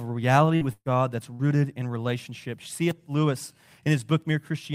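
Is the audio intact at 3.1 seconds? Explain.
Yes, the audio is intact at 3.1 seconds, with no fault audible at that moment.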